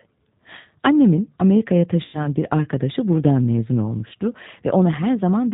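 Speech runs through the G.729 codec for the whole clip, and the damage is plainly audible. Nothing reaches above 4 kHz, and the voice has a rough, synthetic edge because the decoder rebuilds it from a vocal tract filter, a pitch predictor and a few pulses per frame at 8 kbit/s. That synthetic roughness is what separates it from a clean narrowband telephone line, which would lose the top end but keep a natural texture.

From 2.05 to 2.28 s there is VoIP packet loss concealed by the speech codec. About 90 ms of audio never arrived, which fits nine lost 10 ms frames. Rather than falling silent, the decoder extended its last pitch and filter at a falling gain, so the gap becomes a stretched buzzy tone or coloured noise that fades. Because each frame builds on the one before, the voice stays weak or distorted after packets return. That held and fading sound, with its slow recovery, separates concealment from a plain dropout, which would simply cut to silence.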